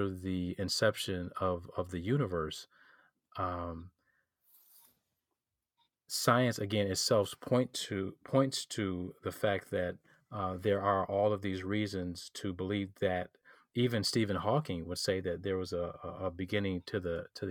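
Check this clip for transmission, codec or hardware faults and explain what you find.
Nothing in this speech recording points to a transmission, codec or hardware fault. There is no event to locate or explain.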